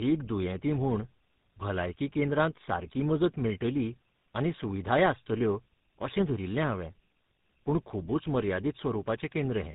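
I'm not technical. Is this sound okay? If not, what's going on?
No. From start to finish the speech sounds rough, muffled and warbly, with nothing above about 3.8 kHz, so it has a thin, boxy telephone quality. This is tandem speech coding: the call passed through more than one phone network, and the speech was squeezed by a mobile phone codec twice in a row, which fits GSM full rate. The second squeeze worked on already-damaged sound, stacking up the flaws.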